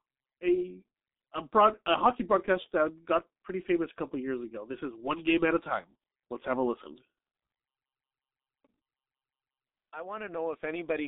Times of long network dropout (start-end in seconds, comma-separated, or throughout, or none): none